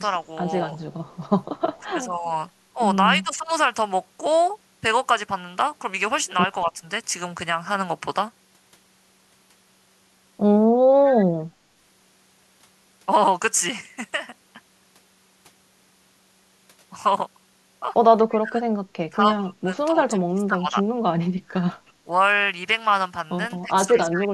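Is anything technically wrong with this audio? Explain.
Yes, this speech has two call-processing faults. Echo leak at 0.92 to 1.77 s, 11.05 to 11.12 s and 18.3 to 18.37 s: a copy of the voice returns about 230 ms late, very faint at first and clearer later. The likely cause is a far-end loudspeaker echo that the echo canceller failed to remove.

Speech suppressed in double talk at 1.79 to 3.5 s, 6.64 to 6.78 s, 18.39 to 21.65 s and 23.62 to 24.3 s: the voice dips in pieces, by about 5 dB briefly and by up to about 20 dB between 18.39 and 21.65 s. This is likely an echo canceller turning down the talker while both sides spoke.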